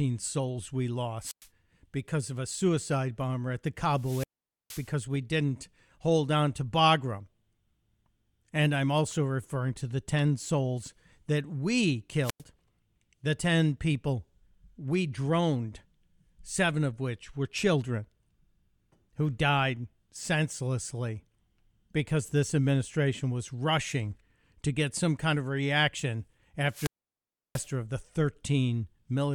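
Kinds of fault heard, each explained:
Wireless microphone squelch dropout: the radio link fades and the receiver mutes its output. Each time, hiss rises briefly, near silence follows, and the speech returns. Dropouts begin at 1.21, 3.95, 12.22 and 26.67 s, muting for about 0.1 to 0.68 s.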